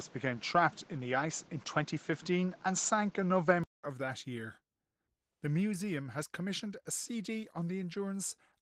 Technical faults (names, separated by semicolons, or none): Opus voice compression; input switched to a poorer device